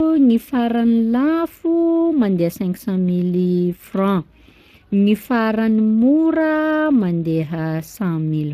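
Speech throughout carrying plainly audible Speex codec damage, a hoarse, noisy CELP texture consistent with roughly 22 kbps, with the spectrogram showing nothing above 15.3 kHz.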